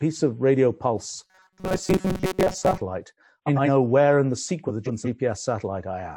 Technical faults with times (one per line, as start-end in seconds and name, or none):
1.23-2.81 robotic sound from repeated short buffers
3.46-3.69 frames out of order
4.68-5.07 frames out of order